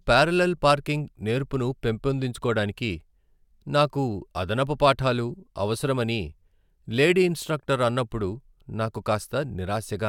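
No technical faults can be heard anywhere in it.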